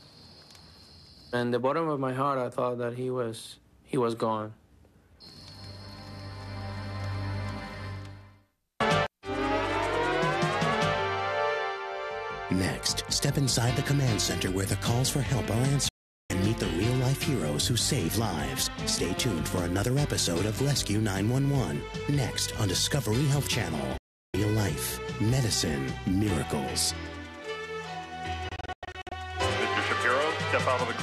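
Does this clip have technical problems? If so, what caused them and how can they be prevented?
Yes. The sound snaps to silence at 15.89–16.30 s and 23.98–24.34 s, and breaks into several brief holes between 28.49 and 29.12 s, each gap under 0.1 s. This is digital broadcast dropout: the receiver muted on corrupted or missing frames. A stronger signal, better antenna placement, or more robust error protection would prevent it.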